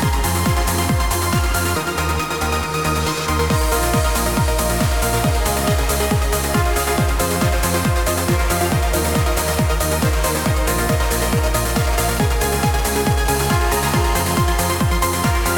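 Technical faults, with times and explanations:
13.36 to 14.41 s, GSM phone buzz: a steady, raspy 217 Hz buzz with many harmonics, about 14 dB below the sound. A nearby phone's radio bursts were rectified by the audio circuit.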